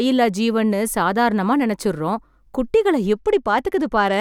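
From 3.18 s to the end, the treble dulls and gritty noise creeps in: a Bluetooth SBC bit pool drop, with starved upper sub-bands pointing to a bit pool cut from 28 to about 13.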